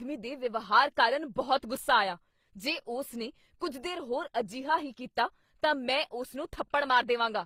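All the way through, the speech carries two layers of compression artefacts at once, with nothing above 15.8 kHz. That's likely transcoding between lossy codecs, something like low-rate HE-AAC followed by Opus, where the second encoder spends bits re-coding the first one's artefacts and adds its own.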